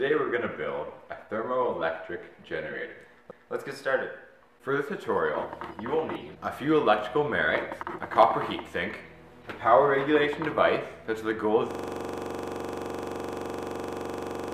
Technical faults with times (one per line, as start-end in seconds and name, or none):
11.71-14.53 system hang loop